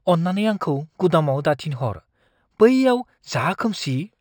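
Throughout the speech there is a faint metallic shimmer on sibilants, with the top of the band sounding dulled. This is imaging from linear upsampling, which fits a rise from 12 kHz to 48 kHz by straight-line interpolation. Its weak filtering leaves mirrored copies roughly 30 dB down, the first between 6 kHz and 12 kHz.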